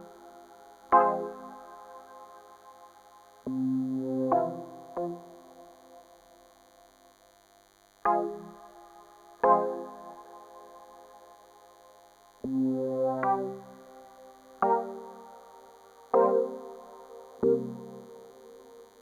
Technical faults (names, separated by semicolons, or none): DECT cordless phone buzz